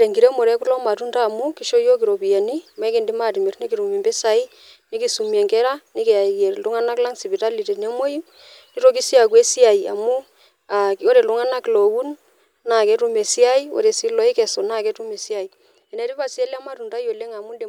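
A speech clip with zipper noise from 14.63 to 15.81 s, just after "ore sii lokesu". The level drops by about 10 dB in roughly 2 dB jumps, around four per second, and each jump leaves a small tick, so a zipping rides on the sound while it fades. This gain is being stepped without any smoothing between values.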